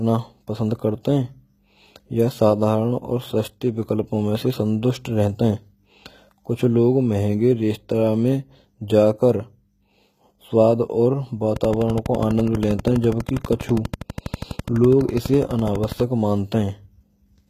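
Throughout the speech, the treble has the gritty, metallic sheen of HE-AAC compression, most likely at a rate near 20 kbps. Upper bands are rebuilt from copies of lower ones, so sibilants sound lispy. A spectrogram shows repeated, smeared high-band patches and nothing above 14.9 kHz.

From 11.56 to 16.01 s, a train of clicks ticks steadily at about 12.2 per second, around fifty in all, rising roughly 5 dB above the speech and persisting through pauses. The likely cause is interference. The waveform shows evenly spaced spikes of much the same shape, and the spectrogram shows thin vertical lines.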